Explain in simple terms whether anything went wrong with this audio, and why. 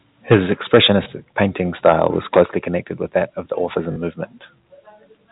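A few things went wrong. The loudest moments crackle with microphone overload at 0.31, 0.74 to 0.91, 1.85 to 2.07 and 2.36 to 2.42 s. The peaks have their tops sliced off, which gives a harsh, gritty edge. The likely cause is a microphone input set too hot, so the converter ran out of room.

Right after two of those crackly peaks, at 0.34 and 2.43 s, the whole sound suddenly gets a bit quieter, background included. That's a microphone volume step-down: the call software likely heard the distortion and turned the mic's input level down in a single jump.

There are also two brief glitches: a small blip of about 20 ms at 1.04 s, and a short robotic stutter of about 40 ms at 3.92 to 3.96 s. That's packet loss with the last packet repeated. Audio went missing in transit, and the receiver replayed the previous chunk to fill the gap, so the longer one buzzes.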